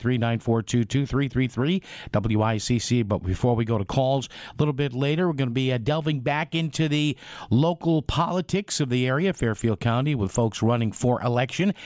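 No dropouts, clicks, distortion, level jumps or timing errors turn up anywhere in the audio.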